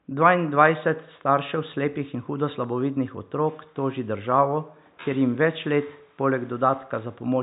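There are no technical faults to describe at any point in this speech clip.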